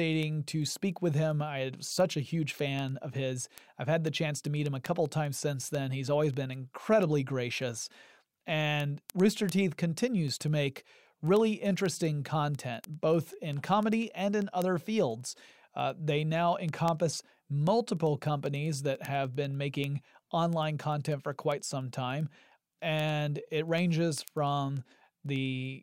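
From 0.13 to 25.75 s, word clock ticks recur about ten per second as an unlocked link slips single samples. Unlike random crackle, they stay evenly spaced.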